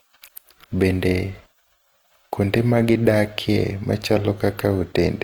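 Throughout this speech recording, the sound has a grainy, rough texture, with a noisy sheen where clean tonal detail should be. Bandwidth stays full, reaching to about 20.2 kHz. It is likely Opus compression in its music (CELT) mode, with noise-filled bands pointing to roughly 24 kbps.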